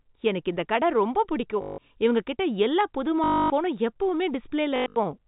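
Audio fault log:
1.62–1.78 s, 3.24–3.5 s, 4.76–4.96 s: packet loss with last packet repeated. Audio drops out after "எனக்கு இந்த கடை ரொம்ப" and "இவங்ககிட்ட எல்லா புது", and the last packet is replayed, out of step with pitch. Repeats buzz robotically near 50 Hz, which fits 20 ms packets. The third is scattered, with the longest run 100 ms.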